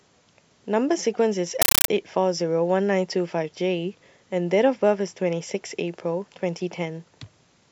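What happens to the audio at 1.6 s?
From 1.62 to 1.88 s, compressed stream played as audio replaces the speech: undecoded bitstream bursts of 9.33 ms, 31.25 per second, produce loud chattering static.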